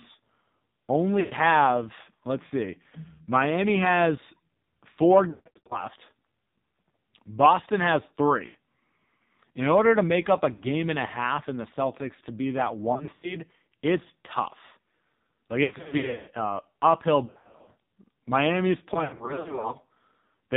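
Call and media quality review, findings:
AMR narrowband mobile codec, whole clip: heavy damage, speech cut off above 4 kHz and buzzy, synthetic voicing, which fits a low AMR-NB mode near 5.9 kbps. Unlike plain low-pass filtering, the voice itself sounds modelled, not merely dull.

Lost AMR speech frames at 1.20, 5.30 (after "has four"), 8.46, 10.54, 12.94, 15.64, 17.26 and 18.94 s, 60 to 420 ms each. The voice smears and fades instead of hard-cutting, because the decoder reuses the last pitch and vocal tract settings.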